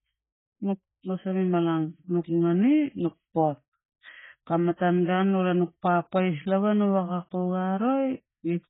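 From start to finish the speech has nothing above 3.8 kHz and a dull, smeared sound with warbling, fizzy sibilants, likely from heavy AAC compression at a bitrate near 20 kbps. A plain low-pass filter would dull it cleanly, without that swirling artefact texture.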